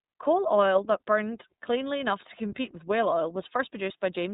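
From start to end, the speech carries iLBC codec damage, and it is plainly audible. Nothing above 4 kHz survives, so it sounds narrow and muffled. Each frame is coded independently, leaving a rough, synthetic edge. The texture points to 30 ms frames at about 13.33 kbps.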